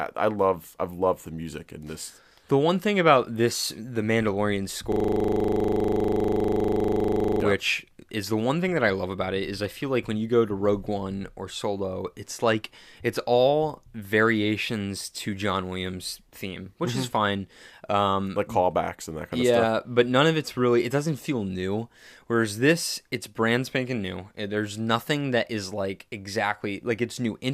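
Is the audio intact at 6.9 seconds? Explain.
No. A system hang loop runs from 4.92 to 7.41 s. One 40 ms slice of speech repeats exactly, producing a rigid 25 Hz buzz.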